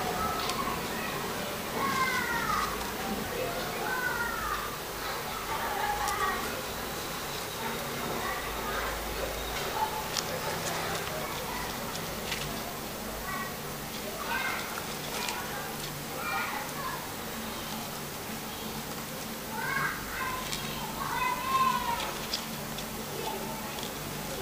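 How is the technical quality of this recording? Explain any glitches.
No technical glitches can be heard in this recording. Nothing interrupts or disturbs the audio at any point.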